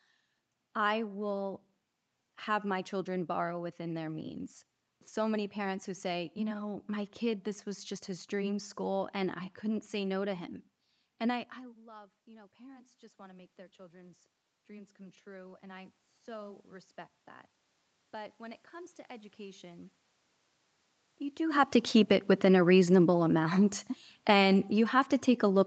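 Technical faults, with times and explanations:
11.85 to 16.99 s and 18.11 to 19.93 s, automatic gain rising: After "I I" the voice becomes much quieter, then slowly swells back over about five seconds, with the room noise rising alongside it. The talker moved away from the microphone around 11 s, dropping the input by about 21 dB. The automatic gain control reacted gradually, adding about 8 dB, so level and background climb together. A smaller swell of about 3 dB follows from 18.11 s.
22.16 s to the end, automatic gain falling: After "do have to keep" the voice arrives loud and then sinks steadily until the clip ends, the background noise dropping with it. The talker moved at the microphone around 21 s, and the automatic gain control judged the input too loud or its background noise too strong. It pulled its gain down gradually rather than at once, so the level starts high and fades downward instead of being corrected immediately.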